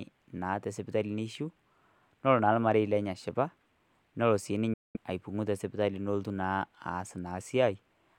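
Speech, with one gap in the middle: at 4.73 s the sound cuts out completely and returns at 4.97 s, a silence of roughly a quarter of a second. It is most likely a Bluetooth dropout, where packets failed to reach the headphones in time, and the length fits about nine lost packets. Unlike a buffer underrun or stall, the speech does not resume where it stopped but picks up later, as though it kept running through the hole.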